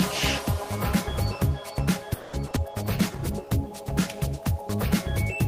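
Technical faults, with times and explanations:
2.13–2.58 s: repeated packet loss (robotic sound). Over this half-second stretch the stream loses four chunks of audio in quick succession, the longest hole lasting about 200 ms. The receiver covers most of the missing time, around 230 ms, by extending the last good sound, which gives the choppy, robotic texture; roughly 60 ms goes uncovered and simply drops out. About half of the span is synthesized rather than received.
2.71–4.78 s: call bitrate drop. The encoder's rate falls from 32 kbps to about 18 kbps and stays at that low level for nearly two seconds. With fewer bits per frame the codec quantizes more coarsely and trims the upper frequencies, so the sound turns duller, rougher and watery through this range, with the fuller quality returning only once the rate climbs back near the end.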